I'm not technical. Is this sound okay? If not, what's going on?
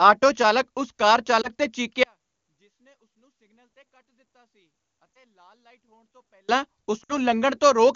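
No. Two problems can be heard.

Lost AMR speech frames: the phone call's radio link damaged small chunks of speech, so the decoder filled each gap by guessing from the last good sound, letting it fade. Right after "ਚਾਲਕ ਉਸ ਕਾਰ", at 1.41 to 1.50 seconds, and again at 5.16 to 5.20 seconds, one chunk went missing, causing a brief dip or wobble. At 7.03 to 7.13 seconds three chunks in a row were lost, so the voice drops to near silence, then returns rough.

One channel inverted: from 2.03 to 6.49 seconds, one side of the stereo pair was likely flipped upside down, so when the two sides are combined they cancel each other. The voice nearly disappears, leaving only a faint trace until it comes back. The HD Voice call coding itself adds little or no audible damage.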